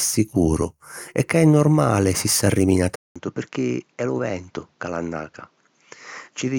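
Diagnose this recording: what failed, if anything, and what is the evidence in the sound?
Driver stage. At 2.96 s, a 200 ms gap. Then the speech drops about 10 dB, cut above 7.6 kHz, with new noise. Likely an input switched to a poorer device.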